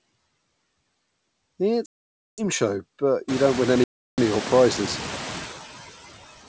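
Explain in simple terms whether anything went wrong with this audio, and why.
Two things went wrong. First, noise suppressor artifacts run through the whole clip. The call's noise suppressor keeps judging which parts of the sound are steady background noise and turning those parts down, moment by moment. It cuts the noise strongly, so the noise drops away in the pauses and comes back underneath the speech. This is easier to notice after the room gets noisier, at about 3.5 s.

Second, there is packet loss on an ADPCM call, twice. Chunks of the call never arrived, so the receiver played silence, and its decoder lost track of the sender. Each hole starts and stops abruptly: about half a second from 1.86 to 2.42 s, and about a third of a second from 3.84 to 4.19 s. When the speech comes back, it can briefly arrive at the wrong loudness or with a click or some roughness, then settles within a few hundredths of a second.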